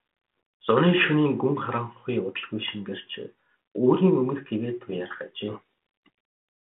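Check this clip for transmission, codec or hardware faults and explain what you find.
One transmission fault stands out, near the end of this speech clip. From 5.48 to 6.07 s, just after "өмнөх гэгээ туяарах", the sound is buried under harsh, grinding distortion for about 0.6 s. This is a codec payload misread: the two ends disagreed on the bit order inside each G.726 code word. The decoder took every reversed code as a different valid step, so the prediction steered wildly until matching packing returned. Around this, the 32 kbit/s G.726 telephone path carries only light coding grain within its 250 Hz to 3.4 kHz band.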